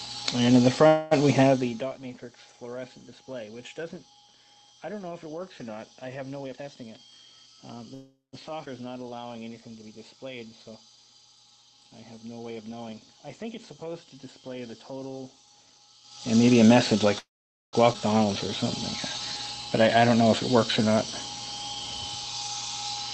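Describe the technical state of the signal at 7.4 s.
At 7.4 s the receiver's jitter buffer was draining a backlog: from 6.44 to 7.47 s it cut out pitch-period-length slices, about a fifth of a second in all, in a jitter buffer speed-up. The audio runs about 21% fast at unchanged pitch and sounds hurried.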